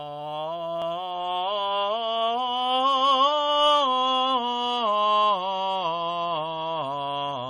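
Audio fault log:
1.11–7.50 s, adaptive stream at a lower bitrate: the music switches abruptly, with no gap, to a coarser encoding that lasts to the end of the clip. Content above 10.7 kHz disappears, dulling the top end, and quantisation artefacts rise. The adaptive player dropped to a cheaper stream version when the connection slowed, and the codec discarded the highs to fit the budget. The change in quality points to a step from roughly 128 kbit/s to 32 kbit/s MP3.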